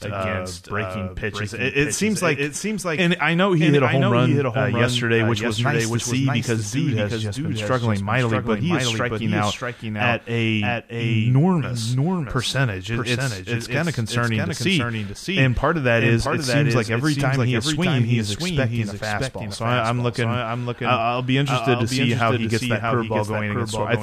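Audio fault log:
throughout, doubled audio track: likely a slower second capture or out-of-step edit, adding a full-band copy of the speech about 0.7 s late, roughly 5 dB quieter, with no decay.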